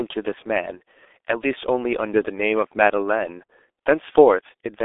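Speech, heavily damaged throughout by the G.723.1 codec. Nothing passes above 3.7 kHz, leaving it muffled, hoarse and blurred. That fits a 6.3 kbit/s low-rate phone link.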